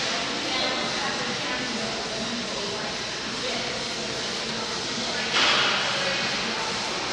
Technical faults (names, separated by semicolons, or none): none